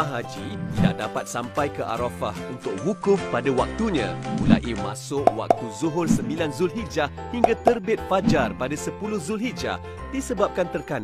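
From 2.50 to 5.06 s the receiver does a digital radio blend to analogue FM over about 276 ms: faint hiss, level shifting about 3 dB.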